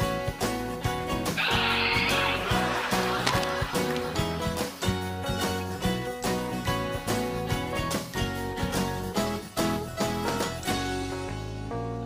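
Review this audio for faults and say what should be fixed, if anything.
Cable scratch noise appears from 3.25 to 3.44 s. A dense, uneven burst of scratching sits over the sound, roughly as loud as the signal itself. The likely cause is a worn cable or connector being moved, so its contact resistance jumps around. Replace worn leads and secure connectors so they cannot shift during recording.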